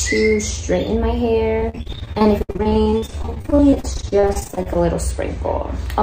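From 1.59 to 4.77 s the audio breaks up with repeated packet loss (robotic sound): 51 gaps, the longest 68 ms, each patched by extending the preceding sound. About a third of that stretch is concealed, giving a choppy, robotic texture with pieces missing.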